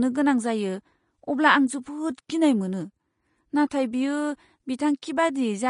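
Throughout, the speech is hissy and grainy, with nothing above 10.6 kHz. This is likely Vorbis compression at a low bitrate, with coarse treble quantisation.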